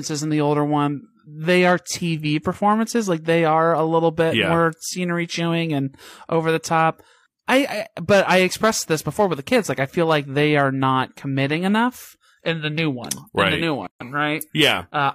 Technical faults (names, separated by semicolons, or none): gap at a join of encoded pieces